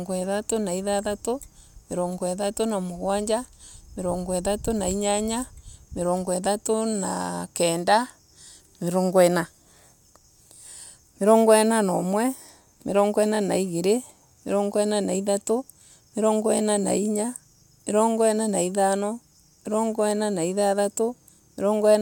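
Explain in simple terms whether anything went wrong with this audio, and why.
Nothing went wrong with this audio; there are no faults to be heard anywhere in it.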